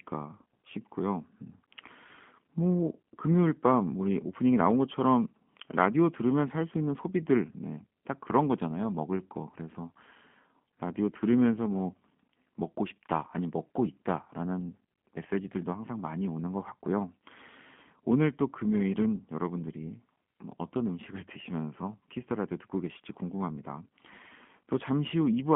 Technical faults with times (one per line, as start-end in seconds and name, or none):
0.00-25.55 G.729 codec